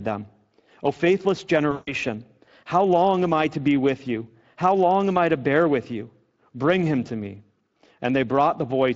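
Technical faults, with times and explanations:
Throughout: Speex codec. The speech has the hoarse, grainy edge of a CELP coder working with too few bits for its excitation signal. The codec damage is plainly audible. The damage suggests a rate around 21 kbps. At that rate the fine structure of the voice is only roughly rebuilt. Breathy noise rides on the vowels.
1.71 to 1.94 s: VoIP packet loss concealed by the speech codec. About 160 ms of audio went missing, which fits eight 20 ms frames. The decoder filled the gap by repeating its last pitch and filter settings while turning the level down frame by frame. This gives a stretched sound that fades. Each frame depends on the one before, so the sound stays thin and smeared for a short while after the gap ends.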